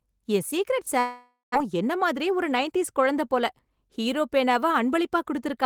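Right after "என் ஸீக்ரெட்", at 0.99 s, the speech smears into a buzzy, fading continuation of its last sound, dies to about 140 ms of silence, and resumes at 1.56 s with roughly 400 ms of speech simply gone. This is most likely a long network dropout: audio stopped arriving, the receiver stretched the final sound across about 550 ms to cover the gap, and playback picked up later, never recovering the lost stretch and leaving the timing shifted by something like 150 ms.

From 1.64 s to 3.77 s the talking sounds slightly hurried, running about 5% fast while its pitch stays unchanged. That is a jitter buffer speed-up. Once audio piled up after the gap, the buffer held more than its target, so the receiver trimmed many tiny pitch-period-sized slices in succession, around a tenth of a second in total, to pull the delay back down.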